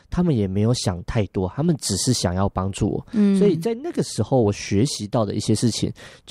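No technical faults can be heard anywhere in the speech.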